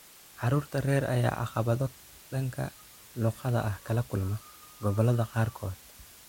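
From the first moment to the last, the speech sits over a constant, even hiss, the sign of low bit depth with dither. The level steps are so coarse that they point to roughly 7 bits. Dither added before rounding turns the rounding error into steady white noise rather than distortion, about 25 dB below the speech. On a spectrogram this shows as a uniform grey wash across all frequencies. The waveform has a thick noise floor that never drops away between phrases.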